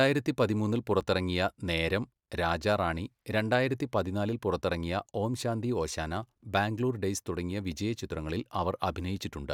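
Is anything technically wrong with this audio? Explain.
Yes. At 1.01 s the speech makes a tiny jump forward. It is likely a dropped buffer (overrun): samples weren't read before the hardware overwrote them, so a few milliseconds vanished and the surrounding audio joined directly, without any gap of silence.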